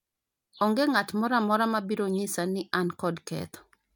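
No technical faults can be heard anywhere in the speech recording, so there is nothing to place on a timeline.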